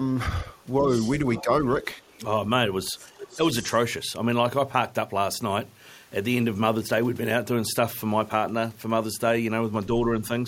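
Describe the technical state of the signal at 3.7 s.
From 3.62 to 3.78 s, the other side's voice leaks through faintly, about 20 dB down, likely loudspeaker echo left uncancelled; the spectrogram shows weak extra harmonics.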